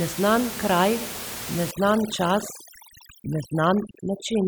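Overdone noise removal sets in at 1.71 s and runs to the end of the clip at 4.47 s. Noise reduction applied far too aggressively is switching individual frequency bands down or off whenever they sit close to its noise estimate. The room noise, about 11 dB below the speech before this point, collapses into near silence scattered with twinkling specks, and the quieter parts of the speech are stripped away too.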